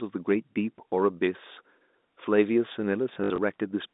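Speech over a G.711 telephone line, band-limited to roughly 200 Hz to 3.7 kHz. From 3.14 to 3.38 s, packet loss with the last packet repeated drops about 100 ms of sound, with runs up to 60 ms, causing a brief robotic 50 Hz stutter that fits 20 ms packets.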